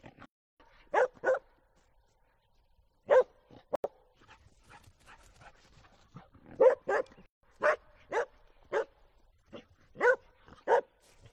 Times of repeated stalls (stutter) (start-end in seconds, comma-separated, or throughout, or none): none